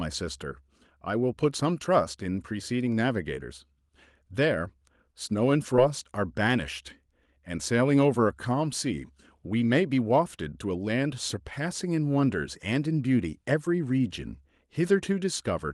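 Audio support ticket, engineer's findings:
Short concealed packet loss at 5.76 s and 13.65 s. Brief smear or wobble, about 10 ms of audio lost each time, probably in the network path ahead of the jitter buffer. Receiver extended the preceding sound to bridge the gap, then crossfaded back. Spectrogram: thin vertical band where harmonics blur or turn into shaped noise, top of band still ending near 12 kHz like the surrounding call audio. Waveform: slight discontinuity in cycle shape, no true dropout to silence.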